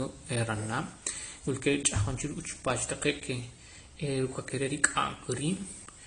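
Transcoding between lossy codecs, likely an MP3 stage followed by AAC, runs throughout: the speech stops above 10 kHz, with two layers of codec artefacts heard together.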